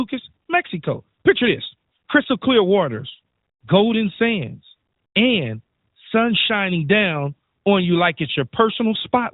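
No technical faults can be heard anywhere in the recording. The speech comes through the AMR narrowband mobile codec, so nothing above 4 kHz passes, and the light coding texture fits its highest mode of about 12.2 kbps.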